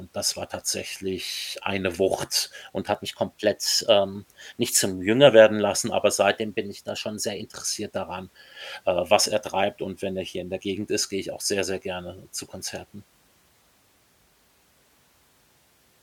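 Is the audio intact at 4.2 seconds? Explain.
No. A drift correction step runs from 2.92 to 5.27 s: the speech plays about 6.2% fast and roughly a semitone high (104 cents), likely because clock-matching software jumped the playback rate to rebalance its buffer. A spectrogram shows harmonics stepping up abruptly, then dropping back.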